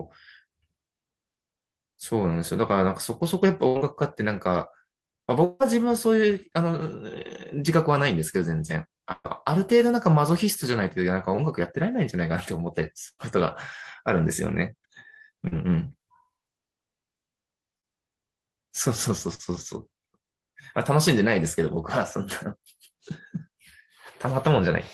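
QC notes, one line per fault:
3.67 s and 9.12 s, burst of packet loss: at 3.67 s about 80 ms of audio is missing, replaced by roughly 78 ms of faded continuation of the previous sound. At 9.12 s about 120 ms is missing, replaced by about 122 ms of fill that drops to roughly 20 ms of silence before the audio resumes. Each gap is a short run of lost packets, shorter and less complete than the dropout.
5.44 to 5.63 s, long network dropout: about 160 ms of audio disappears. Roughly 156 ms of continued buzz or hiss covers the gap, with no silence, before the audio rejoins further on. The likely cause is a stretch where no packets arrived. It is longer and more unbroken than either burst.
13.08 to 19.42 s, scattered short gaps: about four separate holes, totalling around 240 ms lost, with the longest about a tenth of a second. Each is patched by brief continuation, roughly 200 ms in all, so the audio stays mostly clear with isolated ticks and smears rather than one obvious break.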